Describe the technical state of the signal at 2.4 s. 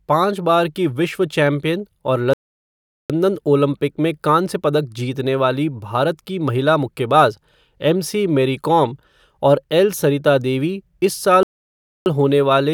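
A playback stall runs from 2.33 to 3.10 s, so at 2.4 s the speech has cut out into silence for about 0.76 s. The player likely ran short of data or was blocked, leaving the output empty until it recovered.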